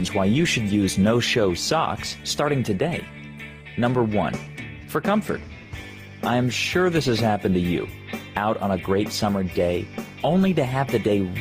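Gain pumping runs through the whole clip, with the level swinging by around 5 dB as it ducks under each loud sound and swells back in the gaps. The likely cause is input gain set far too high with a fast limiter or compressor clamping down. On a waveform, the envelope looks flattened, with loud and soft passages squeezed close together.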